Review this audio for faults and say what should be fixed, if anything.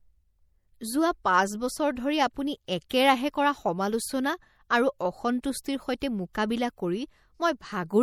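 The clip was most likely squeezed through MP3 compression at a low rate; the damage fits roughly 64 kbps. With too few bits, the encoder zeroes weak frequency lines that then flicker on and off between frames, while content stops at about 19.9 kHz. The result is a plainly audible watery, swirling quality across the speech, with metallic chirps on s sounds and softened attacks. To prevent it, keep the master in a lossless format or encode at a much higher bitrate.

Pre-echo occurs where the codec spread its quantisation noise across a whole transform block, so the noise meant for a loud onset also covered the silence just before it. At 2.89 s, between "পাঁচ বছৰ ধৰি আপুনি" and "কৰা সমালোচনা আৰু", a short hiss leads the attack by about 14 ms. At 6.33 s it leads by about 18 ms. Both onsets sound smeared. To prevent it, use an encoder with block switching for transients, or raise the bitrate.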